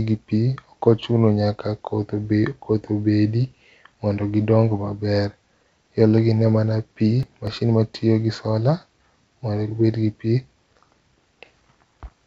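From 7.23 to 7.47 s the speech tears into processor overload crackle. The processor misses several buffer deadlines in a row, skipping chunks of around 10 ms. The waveform shows hard-edged gaps, and the spectrogram shows thin vertical broadband streaks capped at the call path's 8 kHz ceiling.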